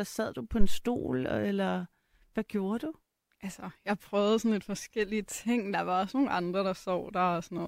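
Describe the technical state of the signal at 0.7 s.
At 0.7 s you're right in the middle of a phantom power thump, running from about 0.61 to 0.81 s, just after "sad du på" and before "eller hvad gjorde du". What you hear is a deep, low thud peaking around -12 dBFS that dies away in roughly 46 ms. A supply got switched on or off on a live input, and that sudden DC step shoved its way through the coupling capacitors into the speech.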